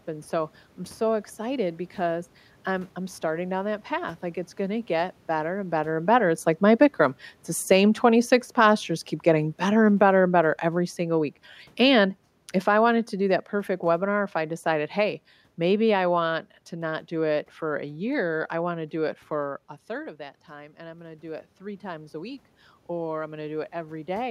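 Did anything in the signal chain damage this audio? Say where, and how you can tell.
Yes. The automatic gain falling fault sits in the call-processing stage. Shortly after the talker moves at about 5.5 s, the AGC judges the level too high and, from 6.03 s after "better and better and" to 16.36 s before "to not do it", pulls its gain down by about 10 dB over ten seconds. The room noise sinks in step with the speech, which shows a gain stage acting on the whole signal rather than the talker changing distance.

The automatic gain rising fault comes from the same call-processing AGC. Around 19.5 s the talker moves and the input drops by about 13 dB, so the AGC starts raising its gain at 19.91 s, after "do it for a", and climbs about 5 dB until 22.49 s, before "or I'm". Speech and room background swell together over roughly two and a half seconds, the slow, joint rise of a gain control, not a performer coming closer.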